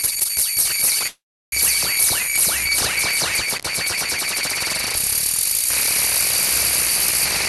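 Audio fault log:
1.07 to 1.54 s, call audio freeze: the sound stalls for about 450 ms. It starts with a short buzzy smear of the last bit of audio that fades out, then roughly a third of a second of dead silence. When it picks up again it carries on from exactly where it stopped, so nothing is lost. That points to a likely stall in packet delivery that drained the jitter buffer, leaving everything after it running about 450 ms late.
3.55 to 3.65 s, intermittent contact: a quick dropout where the signal cuts out for about 70 ms, with a little crackle on each side as the connection breaks and makes again. During the gap there's just faint hiss instead of the sound. That's the signature of a loose plug or cable opening for an instant. It sits on audio that already tops out around 12 kHz from the call codec.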